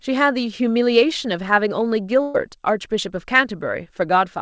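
At 2.22 s the speech smears into a held, fading continuation of the last sound, then jumps ahead at 2.36 s. This is a burst of packet loss: consecutive packets were lost or arrived too late, so the receiver extended and faded the previous audio while about 120 ms went missing.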